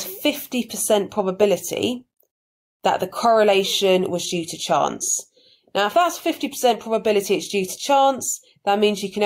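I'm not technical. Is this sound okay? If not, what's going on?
No. Throughout, there's gain pumping: loud and soft parts end up closer in level and the sound is squashed, likely from gain set too high and an automatic limiter pulling it down.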